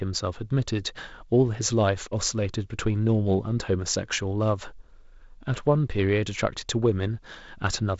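Nothing in this speech clip stood out as a fault on listening.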